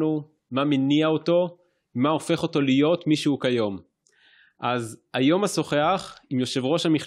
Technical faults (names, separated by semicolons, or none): none